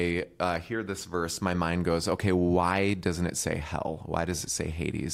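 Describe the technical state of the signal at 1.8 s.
At 1.8 s the speech signal is intact, with no audible dropout, clipping, distortion or other technical fault at that point.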